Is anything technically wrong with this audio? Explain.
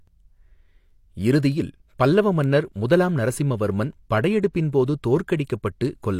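Yes, there is pre-echo from about 5.44 to 5.47 s. A transform codec spread its quantisation noise across a whole block, so noise sized for a sharp attack late in that block also filled the quiet 31 ms before it, heard as a brief hiss ahead of a softened, smeared attack.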